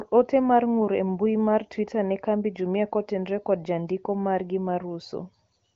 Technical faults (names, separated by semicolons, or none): none